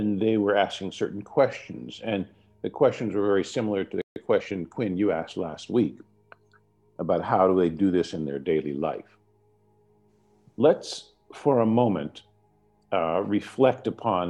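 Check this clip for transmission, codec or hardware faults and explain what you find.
Two related playback faults sit just after the four-second mark.

From 4.02 to 4.16 s there is a playback stall: the output drops to silence for about 144 ms in mid-flow. The likely cause is the player running out of buffered data or its audio thread being blocked, leaving nothing to send until it recovered.

From 4.16 to 5.12 s a time-compressed catch-up follows: having fallen behind, the player trims its backlog by cutting out small slices and cross-fading the joins. The audio runs about 1.15 times fast at its normal pitch, sounding hurried.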